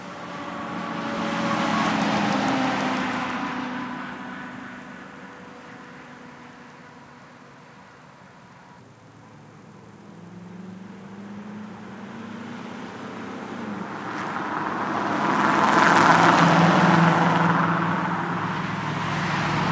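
No technical faults can be heard in this recording of everyday sounds. It has passed through a call's microphone processing, which leaves nothing above 8 kHz and trims away the very lowest bass, as that processing normally does.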